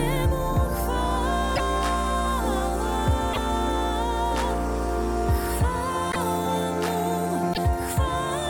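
At 1.55 to 1.60 s, 3.33 to 3.38 s, 6.11 to 6.16 s and 7.53 to 7.58 s, the sound jumps ahead with a brief disturbance lasting about two 24 ms frames. This is likely a broken MP3 bit reservoir: after frames were lost, the following frames fetched borrowed data from the wrong bytes. Unlike a clean dropout, the damage is a skip plus corrupted decoding, not simple silence.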